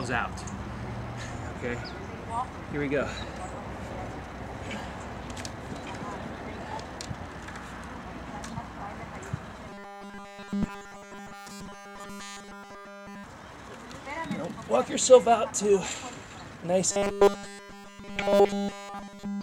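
Audio with robotic sound from repeated short buffers at 9.69 to 13.24 s and 16.92 s to the end. A rigid 200 Hz buzz likely comes from one 5 ms buffer replayed in place of nearly all new audio, showing as a repeating identical cycle on the waveform and evenly spaced 200 Hz harmonic lines on a spectrogram.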